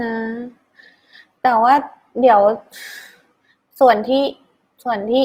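Throughout the speech runs with a grainy, rough, noisy texture, likely from Opus compression at a low rate, fitting about 24 kbps in its music mode. Full bandwidth remains, but starved bands are filled with noise, so it sounds gritty rather than swirly or hollow as MP3 does.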